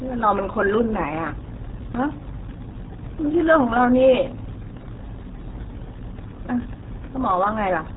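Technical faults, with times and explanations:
Throughout, RealAudio 14.4 codec: the speech is heavily damaged, muffled and gargly. The sound points to an 8 kbit/s dial-up speech codec. Nothing above 3.8 kHz survives, so consonants lose their edge. The coarse coding smears the voice into a bubbling, underwater texture.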